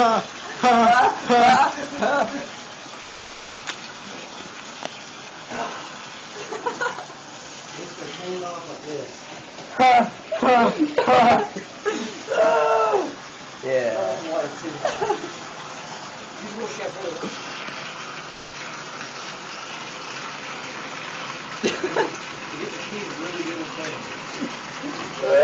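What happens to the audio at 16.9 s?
At 16.9 s the receiver's jitter buffer is in a speed-up, running from 16.11 to 17.16 s. Packets had piled up, so the buffer held more audio than its target, and to bring the delay back down it cut out many short slices of one or a few pitch periods, roughly 0.4 s in all. The sound plays about 133% fast while keeping its pitch, so this stretch comes across as briefly hurried and rushed.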